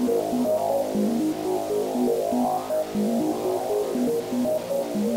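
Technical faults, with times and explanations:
Throughout, low bit depth without dither: the sound carries a grainy, rasping distortion that tracks its level and texture, with the error sitting only about 20 dB below the signal. The likely cause is rounding to about 5 bits without dither, so the error stays locked to the waveform. The waveform shows visible stair-steps, and the quietest stretches collapse to silence or flicker between two levels. On a spectrogram, broadband hash rises and falls with the sound.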